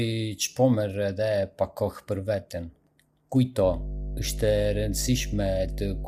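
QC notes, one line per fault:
throughout: low-delay AAC compression, plainly audible; grainy, rough speech with noise between harmonics and a synthetic top band, likely short AAC-ELD frames at roughly 32 kbps.
3.61 s to end: mains hum, a steady 50 Hz tone with low harmonics, strong and only slightly below the speech, from power line coupling such as a ground loop.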